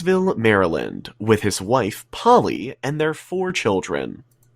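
At 2.56 s, right after "with his wife", there is a sudden gain jump: the speech and the background noise both drop by about 6 dB at once, with no fade, and stay at that lower level until 3.50 s, where they step back up just as abruptly. Because the floor and the speech shift together, the change sits in the signal chain rather than in the talker, most likely a digital gain setting applied instantly instead of ramped.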